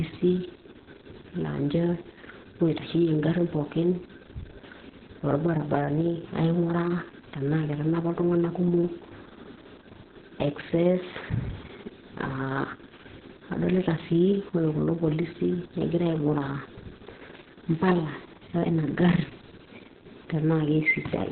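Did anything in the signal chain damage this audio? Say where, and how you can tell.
Yes, at the codec stage, throughout the clip. Opus voice compression has heavily damaged the speech. Nothing survives above 4.2 kHz, so it sounds muffled, hoarse and faintly robotic. That narrowband cut and coarse excitation point to SILK running at a very low bitrate, around 6 kbps.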